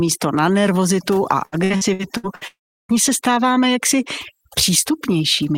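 Overdone noise removal runs through the whole speech clip. The reducer was set too hard. It pulls individual frequency bands down whenever they sit near its noise estimate. Soft parts of the voice vanish with the hiss. The background drops, flecked with twinkling specks.

From 1.45 to 2.44 s there is repeated packet loss, heard as robotic sound. Short holes keep appearing, the longest about 67 ms. Each is patched by stretching the last sound. Roughly a third of this stretch is filled in. It sounds choppy.

From 2.47 to 2.92 s comes a long network dropout, the likely cause of what follows. The last sound is extended as a brief fading buzz or hiss. Then about 0.34 s of silence remains. The speech resumes with that part missing.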